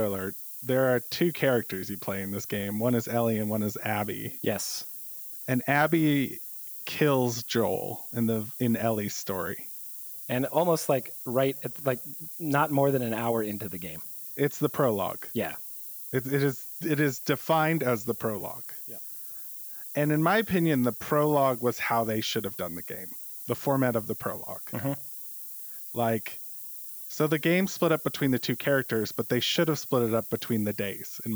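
It's a speech recording with low bit depth with noise shaping from start to finish: a steady, thin hiss tilted hard toward the top of the band, sitting only about 15 dB below the speech. That points to roughly 7-bit quantisation, with the rounding error fed back so the noise is pushed up in frequency.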